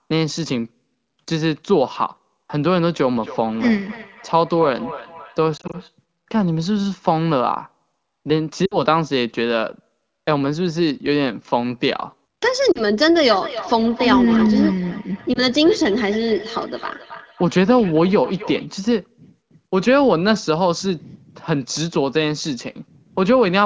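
From 3.15 to 5.96 s, feedback echo between two devices: each syllable returns roughly every 300 ms, about 14 dB below the speech, thinner and ringing. On a spectrogram it shows as faint repeated copies of each syllable at that spacing. Inside it, from 5.57 to 5.76 s, lost AMR speech frames drop 80 ms in short gaps spread over 160 ms. The decoder stretches the last good sound at falling gain, heard as brief warbles and seen as smeared, fading patches. Further frame losses come at 8.66 s (60 ms) and 12.72 s (40 ms), each a short dip or blur. The echo returns from 13.25 to 18.74 s at the same spacing and level, and during it a single 20 ms loss at 15.33 s gives a small dip in the waveform.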